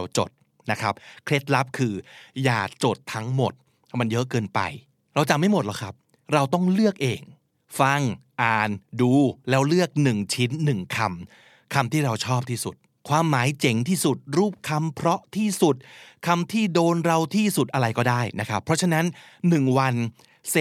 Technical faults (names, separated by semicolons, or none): none